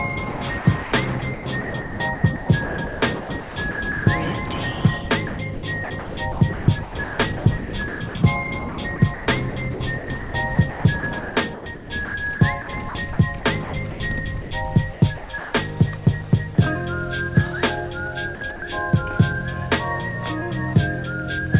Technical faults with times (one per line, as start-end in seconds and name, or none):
0.32-0.92 sound chopped by the voice detector
1.19-4.07 sound chopped by the voice detector
5.27-8.15 sound chopped by the voice detector
8.69-14.00 sound chopped by the voice detector
14.42-14.51 sound dropped by the voice detector
14.93-15.53 sound chopped by the voice detector
16.55-16.58 sound dropped by the voice detector
18.35-18.62 sound chopped by the voice detector